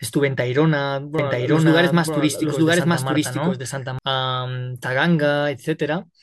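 From 1.19 s to 3.99 s the speech is overlaid by a second, full-band copy of itself, trailing about a second behind and at roughly the same loudness, so two passages talk over each other. The copy has no fading tail or added room sound, and it appears and disappears abruptly at those edges. This is a doubled audio track, likely from the same audio being captured again through a slower path and mixed in out of step.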